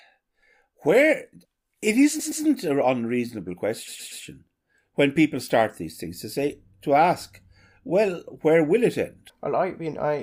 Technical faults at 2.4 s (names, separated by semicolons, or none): repeated frames